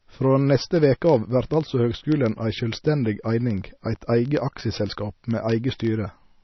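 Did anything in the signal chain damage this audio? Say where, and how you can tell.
Yes. At the codec stage, the whole clip loses everything above 5.9 kHz and has watery, swirling speech, likely from a very low-bitrate MP3 encode. The swirl separates it from a simple low-pass filter.

At the digital link, word clock ticks run steadily from 0.11 s to the end, one every 20 ms or so. An unlocked receiver clock about 1000 ppm off slips one sample each time, so these ticks are far more regular than random clicks.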